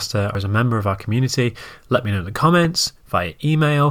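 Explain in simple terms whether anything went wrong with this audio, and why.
Two things go wrong. At 0.35 s the speech suddenly leaps forward, losing about a tenth of a second, with a glitch at the join until 0.44 s. These are compressed frames skipped: chunks of the coded audio never got played, so the playback jumps ahead.

From 2.65 to 2.76 s a loud disturbance breaks over the speech, then stops cleanly. This is a corrupt FLAC frame: damaged data was decoded without being checked, producing garbage until the next undamaged section.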